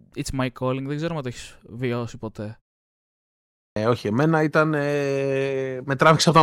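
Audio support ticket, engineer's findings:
Clipped start after a pause, 3.30 to 3.76 s: first 0.46 s of speech swallowed after a 0.77 s silence. Output device sleeping in silence, slow to wake.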